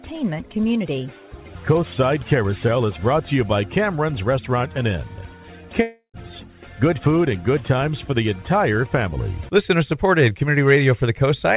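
At 5.82 s the audio cuts out for about a third of a second, running to 6.16 s, and it sounds like a long network dropout is the likely cause. Roughly 320 ms never arrives, so the receiver stretches the last bit of sound into a fading buzzy tail for most of that gap, then leaves about 90 ms of silence before the audio picks up again, with the lost part simply gone. Everything stays band-limited to 4 kHz, which fits the G.711 A-law call path.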